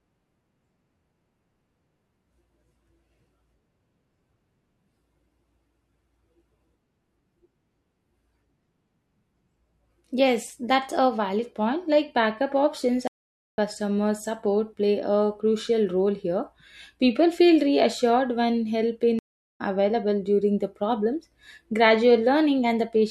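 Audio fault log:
13.08–13.58 s, stream reconnect: after "backup options" the speech drops into about half a second of silence (495 ms), then picks up at "support play a crucial" having skipped roughly 0.4 s. The connection broke, the player reconnected and a fresh decoder joined the live stream further on.
19.19–19.61 s, stream reconnect: right after "feel reassured when help" there is a 410 ms gap, and the speech returns roughly a third of a second further along. Again the link dropped and the player restarted decoding mid-stream at a later point, losing that stretch.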